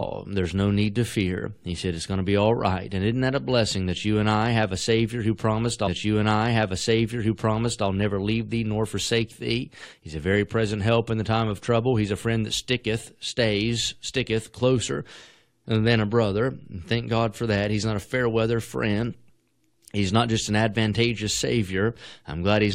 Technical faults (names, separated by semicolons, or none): stream segment repeated